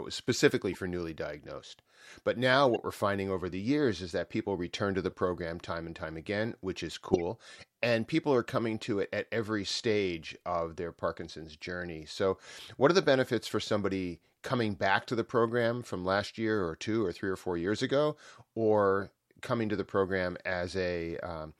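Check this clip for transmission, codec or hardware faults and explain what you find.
Four short bursts of corrupt frame decoded damage break into the speech. At 0.73 to 0.77 s, between "was specifically" and "newly diagnosed", there is a faint blip peaking around -35 dBFS. At 2.69 to 2.79 s, just before "we're finding over the", a longer chirp spans several frames at about -25 dBFS. At 5.11 to 5.13 s, after "people return to the", a blip sits near -45 dBFS. At 7.13 to 7.21 s comes the loudest, a sharp squeak of noise at about -10 dBFS. Each is a compressed frame whose bits were flipped but decoded anyway. The misread gains and codes put energy at the wrong frequencies for a frame or a few frames.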